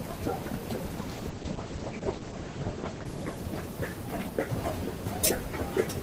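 Everyday sound clip with a call bitrate drop from 0.99 s to the end: audio turns coarse and muffled, bandwidth falling from 16 kHz to 8 kHz, bottoming out for 1.25 s, which fits a drop to roughly 10 kbps.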